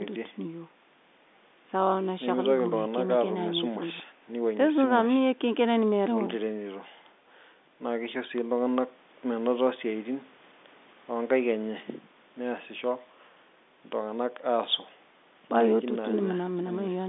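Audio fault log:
No faults heard anywhere in this speech.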